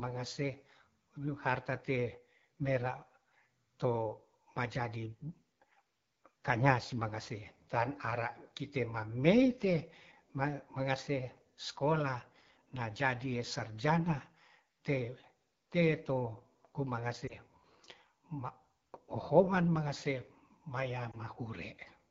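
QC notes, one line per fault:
Throughout: AMR wideband (HD Voice) codec, with rough, raspy speech that fits a low mode near 8.85 kbit/s. The spectrogram shows coarse harmonics below 6.4 kHz and a noise-filled band up to 7 kHz.
17.27–17.35 s and 21.12–21.17 s: lost AMR speech frames. Each is a brief dip or warble where the decoder reused old pitch with falling gain, which fits one lost 20 ms frame. The waveform shows a short envelope sag.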